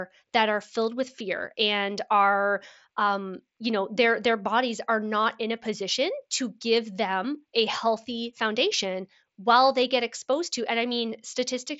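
Speech recorded through a Bluetooth headset, with audio that stops at 8 kHz and a faint grain on louder syllables from the mSBC wideband headset codec, carries one instance of concealed Bluetooth headset packet loss at 7.23 s. A stretch of roughly 7.5 ms, which fits a single lost packet between headset and phone, went missing, and the receiver patched it by repeating the best-matching recent cycle of the waveform. Because the gap is so short, the repair is nearly inaudible. On a waveform, a close zoom shows a short stretch repeated almost exactly, with a slight seam where genuine signal resumes. A spectrogram shows, at most, a hairline column of smeared harmonics.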